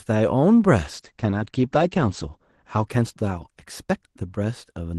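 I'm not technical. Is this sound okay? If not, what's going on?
No, not quite. From about 0.81 s to the end of the clip, this speech goes through a call bitrate drop. The call connection seems to have got worse, so the Opus codec handling the call was told to squeeze the sound into much less data. It then codes more roughly and cuts the top end from around 12 kHz down to about 8 kHz, so the voice turns muffled and a bit rough. At its worst, that lasts about a second and a half.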